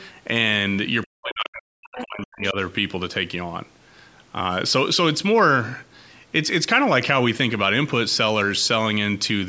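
Right at the start, 0.0 to 0.1 s, there's a faint second voice, roughly 30 dB under the speech; that's likely the other side's voice leaking through from the loudspeaker. From 1.05 to 2.56 s the speech drops hard, as much as 40 dB, and dips for about a second and a half, likely speech suppressed in double talk as the canceller ducked both sides. Within that stretch, 1.97 to 2.02 s, the far voice leaks again, louder this time at about 15 dB below the speech.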